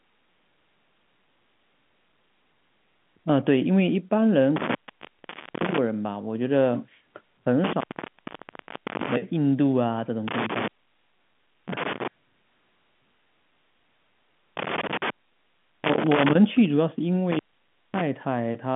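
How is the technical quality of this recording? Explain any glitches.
The recording is marred by an intermittent contact, heard five times, on a telephone-band line with nothing above about 3.8 kHz. The dropouts fall at 4.56 to 5.78 s, 7.64 to 9.16 s, 10.28 to 12.08 s, 14.57 to 16.35 s and 17.31 to 18.01 s. A loose plug or cable opens briefly. The speech vanishes for 0.55 to 1.19 s each time, leaving faint hiss, with crackle at the edges as the contact breaks and remakes.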